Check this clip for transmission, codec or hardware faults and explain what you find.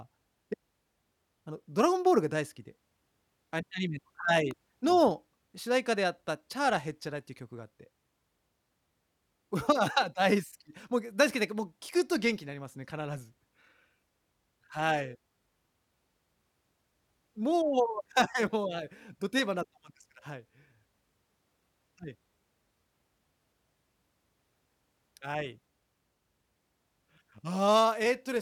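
One fault stands out in this speech clip, a single brief impulse riding over the recording. An electrical switching spike occurs at 4.51 s, lasting only about 2 ms and peaking at roughly -25 dBFS. It is most likely a nearby switch, relay or motor, or a static discharge, throwing off a tiny arc whose burst of energy couples into the audio line. It comes through as a sharp snap or a tight cluster of clicks laid on top of the speech.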